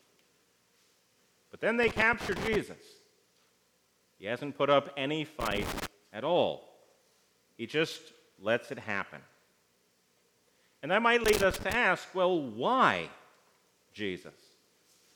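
Loose connector crackle breaks in three times, from 1.83 to 2.56 s, from 5.40 to 5.87 s and from 11.24 to 11.75 s, each burst lasting roughly half to three quarters of a second. A worn or dirty contact somewhere in the signal path is intermittently losing and regaining continuity as it shifts, chopping the audio into fragments. The sudden jumps at each make and break come through as a ragged, irregular scratching crackle.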